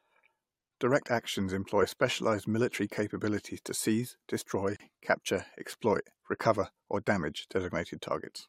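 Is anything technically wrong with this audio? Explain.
Yes. At 4.76 to 4.80 s, just before "capture exploit recover or", a 35 ms gap at a join of encoded pieces drops the speech out. Separately encoded segments kept their encoder delay and padding. It shows as a blank vertical band on a spectrogram and a flat waveform hole with smeared edges.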